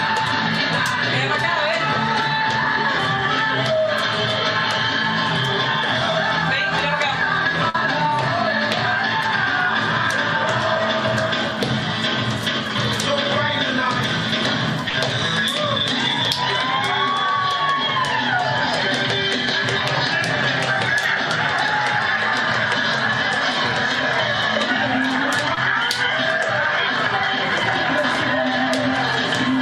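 At 7.69 to 7.75 s and again at 14.89 to 14.94 s, a burst of packet loss occurs: a run of audio failed to arrive in time, so the receiver extended the last sound it had for about 46 ms, turning it down as it went. Each gap comes out as a brief held buzz or hiss that fades, after which the audio picks up roughly 40 ms further along, with that stretch simply gone.

From 25.54 to 25.58 s there is a short concealed packet loss. About 30 ms never reached the decoder, and the receiver filled roughly 22 ms by continuing the preceding sound before blending back into the real signal. It is heard as a quick smear or wobble, brief enough that a short transient in that spot could drop out.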